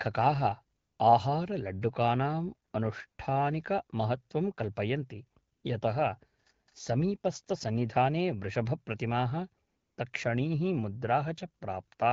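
AMR comfort noise appears at 0.77 to 0.99 s, 2.71 to 2.73 s, 3.07 to 3.17 s, 5.53 to 5.63 s and 9.67 to 9.97 s. Each time, the sender judged the sound silent and stopped sending speech frames, so the receiver filled the gap with smooth synthetic noise. Unlike a dropout, the gap never falls to silence, and unlike a noise gate, the real background is replaced by steady hiss.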